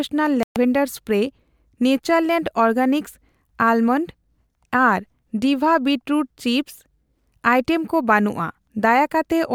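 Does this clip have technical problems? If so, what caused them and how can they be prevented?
Yes. A digital broadcast dropout silences the speech from 0.43 to 0.56 s. The receiver muted after losing a few frames. Stronger reception prevents it.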